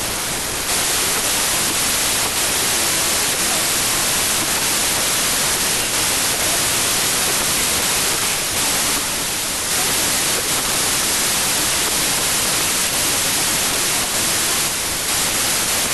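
Speech, buried under loud, harsh noise for the whole clip. The fault is a wrong sample width. Audio stored as packed 24-bit integers is being read as 32-bit integers. Each read value mixes bytes from neighbouring samples, so most values are noise. Only some keep the top bits of the real signal, and the speech survives faintly. Four bytes are taken per sample where three were written. Playback therefore runs about 1.33 times too fast, with pitch raised to match.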